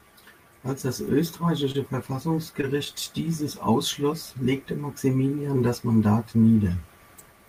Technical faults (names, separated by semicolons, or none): short concealed packet loss